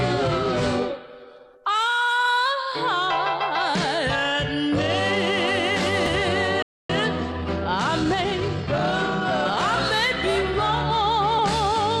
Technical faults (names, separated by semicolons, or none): damaged data in a compressed stream; playback stall; time-compressed catch-up